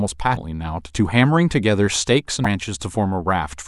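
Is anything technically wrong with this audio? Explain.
Yes. Damaged data in a compressed stream appears twice, at 0.33–0.37 s and 2.42–2.46 s: corrupted frames make the decoder misread and resync, giving brief glitches. Each shows as a short, abrupt disruption on a spectrogram and in the waveform.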